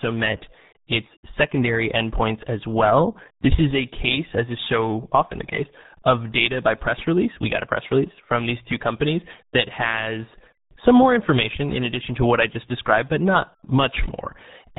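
Speech runs the whole clip through the RealAudio 14.4 codec, and the damage is heavy from start to finish. The sound points to a very low bitrate, around 8 kbit/s, which fits a speech codec built for dial-up modems. Nothing passes above about 3.9 kHz, so the upper band is simply gone and the voice turns muffled, while the coarse coding of what remains leaves a gargly, bubbling texture.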